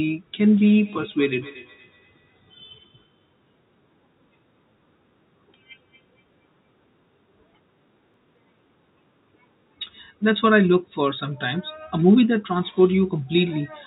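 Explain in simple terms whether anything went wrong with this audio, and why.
Feedback echo between two devices, from 0.57 to 6.69 s: another device in the room replays the speech, the microphone catches it again, and faint repeats return about every fifth of a second.

CD scratch ticks, between 8.14 and 8.81 s: a scratched disc loses a little data on each turn, producing four tiny, very brief clicks in the speech.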